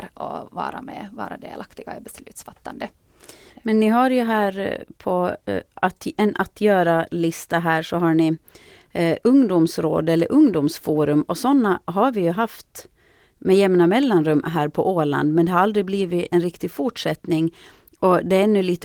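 Nothing stood out on listening to this speech clip.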